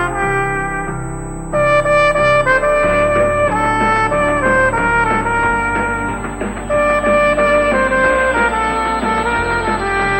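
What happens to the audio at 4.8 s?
At 4.8 s, USB whine is present, as it is for the whole clip. It is a fixed, high-pitched tone at 8 kHz, strongest at 16 kHz, roughly 20 dB below the sound. The bus's 125-microsecond microframes leak through power or ground.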